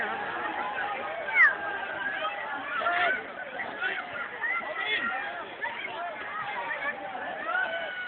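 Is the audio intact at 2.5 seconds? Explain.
Yes, the audio is intact at 2.5 seconds, with no audible dropout, glitch, distortion or other fault at that moment.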